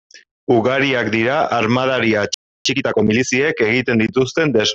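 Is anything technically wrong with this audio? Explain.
Yes, there are two connected faults. A playback stall runs from 2.34 to 2.66 s, right after "dira armadari": the speech cuts off mid-flow into roughly 0.31 s of silence. The likely cause is the player running out of buffered data or its output thread being blocked until it recovered.

A time-compressed catch-up follows from 2.66 to 3.28 s. To clear the backlog left by the stall, the player drops and cross-fades short slices of audio, so this stretch plays about 1.5 times faster at normal pitch, sounding hurried.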